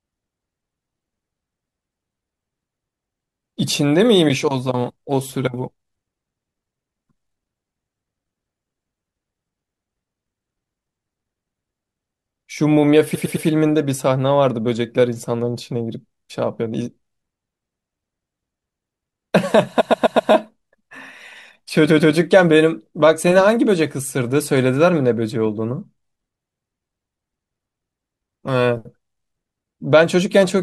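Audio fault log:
13.14–13.46 s, 19.80–20.31 s, 21.89–22.14 s: repeated frames. A block of compressed frames is decoded again, so the same slice of speech stutters. There are three extra plays of a 106.7 ms block, then four and two of a 128 ms block, adding 320 ms, 512 ms and 256 ms.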